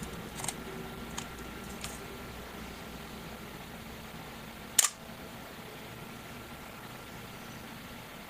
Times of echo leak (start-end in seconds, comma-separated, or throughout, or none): none